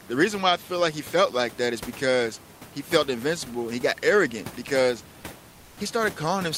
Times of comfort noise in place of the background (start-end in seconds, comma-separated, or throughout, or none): 5.51-5.77